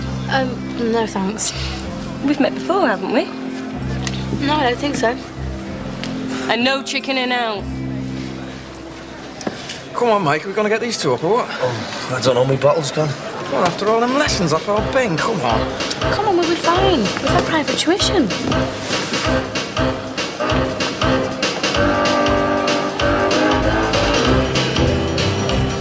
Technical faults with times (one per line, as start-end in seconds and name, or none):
none